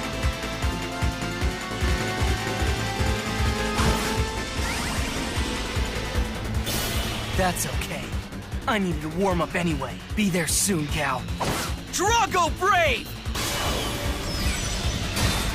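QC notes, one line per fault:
1.84–4.16 s doubled audio track: equally loud full-band copy trails by about half a second, likely via a slower second path; onsets repeat on the waveform, edges abrupt.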